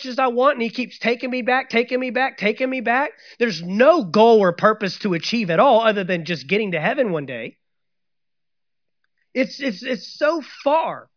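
Nothing technical stands out in this short speech recording, since there are no dropouts, glitches, or other problems to point to anywhere along the way.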